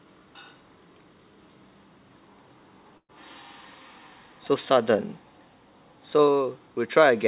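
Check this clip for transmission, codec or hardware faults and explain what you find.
There is one transmission fault, a burst of packet loss. From 2.97 to 3.11 s, about 113 ms of gap is filled by stretching and fading the previous sound. The fill ends in about 80 ms of silence. Then the audio resumes with about 120 ms missing. The call path's band limit means nothing is heard above 4 kHz, which fits a G.711 call codec.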